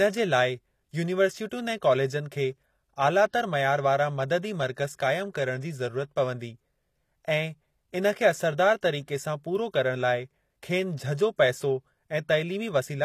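Throughout the speech, sibilants sound gritty and lispy while treble stays bright up to a cut at 14.9 kHz, likely HE-AAC compression rebuilding highs from copied lower bands, fitting roughly 24 kbps, unlike dull plain low-passing.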